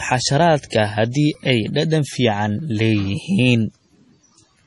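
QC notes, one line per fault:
throughout: MP3 compression, likely at a very low bitrate around 32 kbps; nothing remains above 11.5 kHz, and heavy damage leaves the speech watery, swirly and smeared.
1.34 s, 2.59 s: repeated buffer; audio arrived late, so a tiny piece, fitting a 64-sample buffer, replayed with hard joins: a brief buzz at 1.34 s, a click at 2.59 s.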